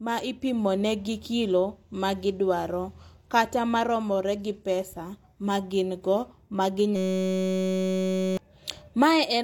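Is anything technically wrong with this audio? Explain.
Yes, a system hang loop from 6.96 to 8.37 s: a tiny 5.33 ms buffer, which fits 256 samples, repeats 265 times, giving a steady 188 Hz buzz replacing about 1.5 s of speech.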